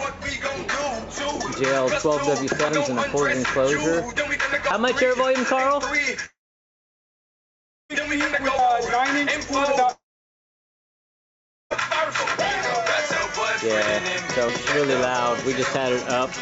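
At 2.69 s the sound skips forward. Roughly a tenth of a second is gone, and the two sides are butted together with no gap. The same skip returns at 8.59 s and 14.49 s, about six seconds apart. That regular spacing points to audio missing between chunks. The likely cause is a recorder working in six-second blocks and dropping a short piece at each changeover.

From 6.26 s to 7.91 s there is a long network dropout. About 1.6 s of audio never arrives. The last sound smears into a brief fading buzz of about a tenth of a second, then roughly 1.5 s of silence follows. The audio resumes further on, with the lost part simply absent. It happens again from 9.91 s to 11.72 s. This time about 1.8 s is missing, with a short fade and then about 1.7 s of silence. Both are likely packet loss on the network, with the receiver covering the gap as best it can. Throughout the clip, nothing is heard above 8 kHz, which fits a G.722 wideband call codec.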